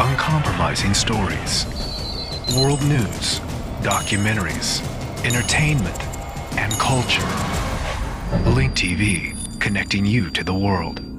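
A loudspeaker-to-microphone loop that was likely sitting right at the edge of feedback produces a feedback whistle from 8.18 s to the end of the clip. The loop gain peaks at a single frequency without tipping into runaway, so one tone at 4.7 kHz keeps ringing instead of building up. It sounds like a thin, steady whistle behind the audio, well below the main sound, roughly 25 dB down, swelling and fading slowly in level.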